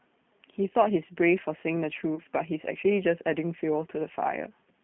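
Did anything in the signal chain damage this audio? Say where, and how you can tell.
Yes. Throughout, the speech sounds like a telephone line, confined to roughly 150 Hz to 3.4 kHz, with a rough, slightly synthetic edge. This comes from the codec stage. G.729 at what sounds like 8 kbit/s discards the real waveform and rebuilds speech from a vocal-tract filter, a pitch predictor and a few pulses per frame.

From 2.16 to 2.22 s the sound briefly smears into a fading, stretched sound and stays weak a moment afterward. This happens at the network stage. A gap of 20 ms, which fits one lost packet, was bridged by the decoder extrapolating its last pitch and filter while it lowered the gain.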